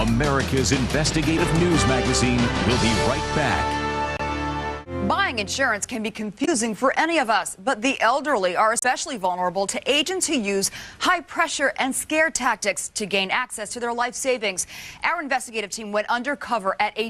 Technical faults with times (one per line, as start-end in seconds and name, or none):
4.17-4.21 damaged data in a compressed stream
6.41-6.48 damaged data in a compressed stream
8.79-8.84 damaged data in a compressed stream